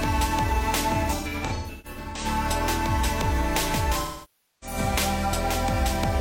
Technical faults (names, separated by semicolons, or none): AAC frame loss with concealment